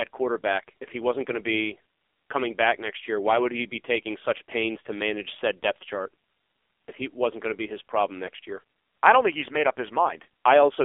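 AMR narrowband mobile codec damage runs through the whole speech clip: nothing passes above 3.6 kHz, and heavy buzzy synthesis fits roughly 5.9 kbps AMR-NB.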